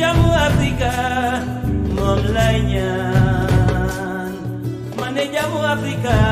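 Nothing in the signal points to any technical fault at any moment in the recording.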